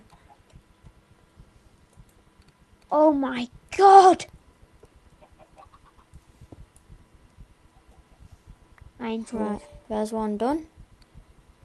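Nothing stood out on listening.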